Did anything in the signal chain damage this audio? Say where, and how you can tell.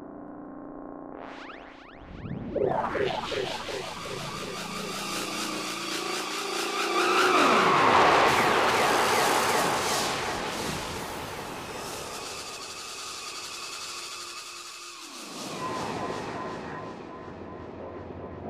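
No, nothing in the signal chain has damaged this recording of sounds. No stage, from the analogue wiring and converter through to storage and playback, leaves an audible mark on it.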